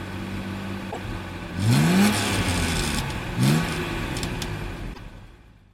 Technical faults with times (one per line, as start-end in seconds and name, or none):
0.88-0.97 damaged data in a compressed stream
4.90-5.00 damaged data in a compressed stream